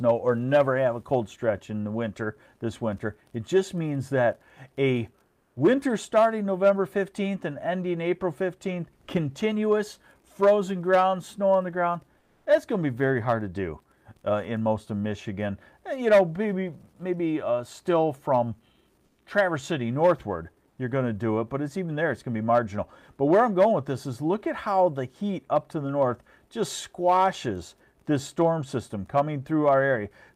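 At 5.27–5.55, 12.19–12.45, 19.05–19.17 and 20.69–20.77 s, comfort noise replaces the background: steady, featureless hiss about 1 to 7 dB quieter, likely from Opus discontinuous transmission. Unlike a noise gate, the pause never falls to silence; instead the background's detail disappears.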